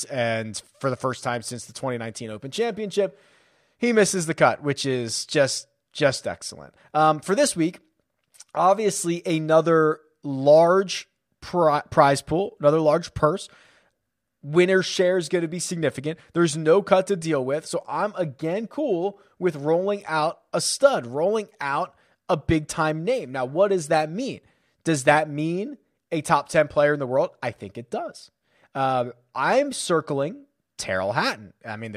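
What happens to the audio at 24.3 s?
Around 24.3 s the speech continues cleanly, with no dropout, click, distortion or other fault to be heard at that point.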